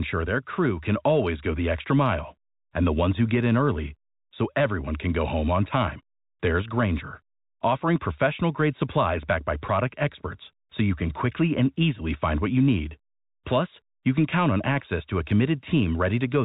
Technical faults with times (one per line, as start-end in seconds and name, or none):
none